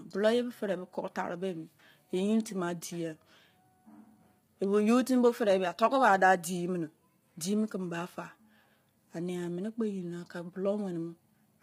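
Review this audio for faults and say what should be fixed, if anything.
Throughout the clip the speech sounds rough and grainy, with noise filling the gaps between harmonics and nothing above 15.7 kHz. This is likely low-delay AAC compression (AAC-ELD), whose short frames resolve pitch poorly; the heavy damage fits a bitrate around 24 kbps. To prevent it, encode at a higher bitrate or record the source before the call codec.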